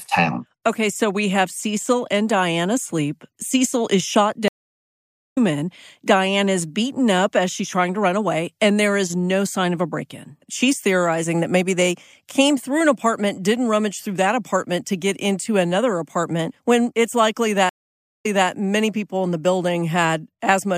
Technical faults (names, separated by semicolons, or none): stream reconnect